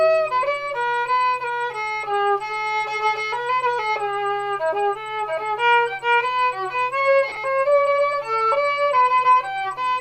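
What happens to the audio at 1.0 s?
Nothing goes wrong at 1.0 s; the audio plays through that moment intact, with no dropout, click or distortion to be heard.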